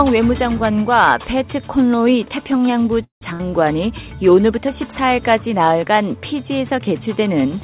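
At 3.04 s the audio stalls for about 0.19 s: the last sound carries on briefly as a fading buzz or hiss, then about 130 ms of silence follows before the audio resumes exactly where it left off. This call audio freeze likely comes from packets held up in transit, which emptied the jitter buffer. Nothing is lost, but everything afterwards arrives about 172 ms late, which sets it apart from a dropout.

Shortly after, from 3.33 to 3.41 s, a burst of packet loss produces a brief 60 ms held, fading fill. When the sound comes back it has jumped ahead, because those 60 ms of audio are missing. It is a skip, not a pause. Across the whole clip, the narrowband call path leaves nothing above 4 kHz.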